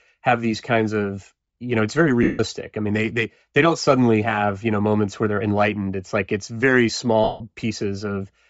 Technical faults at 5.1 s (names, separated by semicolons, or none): Bluetooth LC3 compression